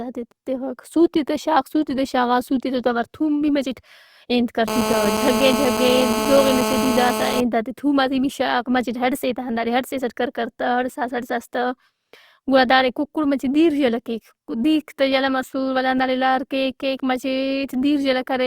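From 4.68 to 7.41 s, after "بھی مچٹ انت کر", a GSM phone buzz: rectified 217 Hz call bursts give a steady raspy buzz about 2 dB below the speech, harsher than mains hum.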